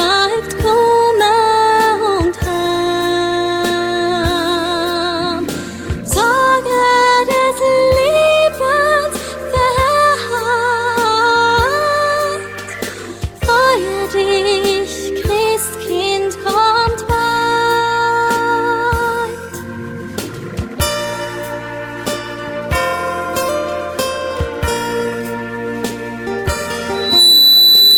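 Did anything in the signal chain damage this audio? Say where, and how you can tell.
Yes. The sender's audio clock runs faster than the receiver's, by something like 4 percent, for the whole clip. This is clock drift between sender and receiver at the receiving buffer, fed over the network. Because packets arrive faster than the receiver plays them out, its jitter buffer keeps filling. To keep latency from climbing, it has to throw away small slices of sound again and again, so the timing never sits quite still.

Those discards are heard as repeated timing corrections, in two stretches: from 0.15 to 20.61 s, where the sound runs at 104 percent of its proper pace, and from 25.09 to 26.26 s, at 105 percent. Each correction removes a short piece, always in the same direction but at uneven spacing. The result is a slightly hurried, faintly stumbling tempo with small hiccups where the cuts land.

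At the playback end, a loudspeaker feedback squeal starts at 26.94 s and runs to 27.97 s. A microphone is picking up the loudspeaker it feeds, and at 4 kHz the loop gain exceeds one. That single tone swells within about a third of a second and settles about 10 dB above the program material. It is heard as a sharp, steady whistle sitting on top of everything else.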